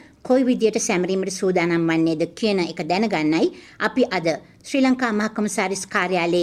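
No technical faults can be heard anywhere in the clip.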